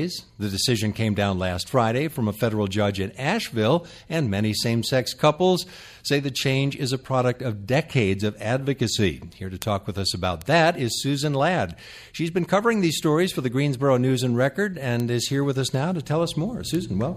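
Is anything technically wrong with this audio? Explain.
Yes. A bit error spike occurs four times, at 9.62 s, 10.42 s, 15.0 s and 16.75 s. At each point a flipped bit in the digital data makes one or two sample values leap by a power of two and snap straight back. The result is a single sharp tick unrelated to the surrounding sound. The first spike spans two samples and peaks near about -2 dBFS; the others are single samples at about -8 dBFS. On a waveform each appears as an isolated needle, and on a spectrogram as a thin vertical line across all frequencies.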